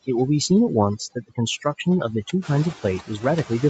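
From the start, the background drops and breaks up into twinkling specks. That is overdone noise removal: the reduction was set so strong that bands near its noise estimate are driven far down or off, taking quieter parts of the speech with them.

Running through the whole clip are noise suppressor artifacts. What noise survives sinks by about 7 dB in the gaps and rises back under the speech, because the suppressor lowers each band it judges to be steady noise frame by frame. The room noise rises by about 13 dB at roughly 2.5 s.

Between 0.99 and 1.38 s, small pieces of the speech sound swallowed and faint, adding up to around a tenth of a second. This is speech cut by the noise suppressor. It mistook those soft parts for background and pulled them down by as much as about 18 dB.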